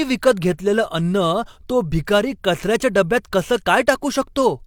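No technical faults are audible.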